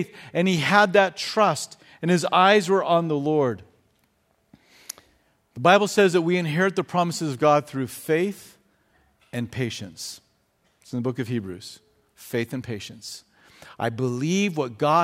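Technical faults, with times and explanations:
No technical faults can be heard in this speech clip. Nothing in the audio calls for a time or an explanation.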